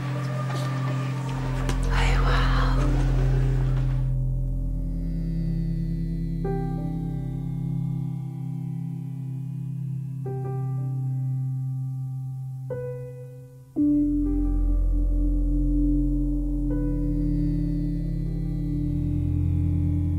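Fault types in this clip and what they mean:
No technical faults can be heard anywhere in this clip. Nothing in the sound points to a problem in how it was captured or handled.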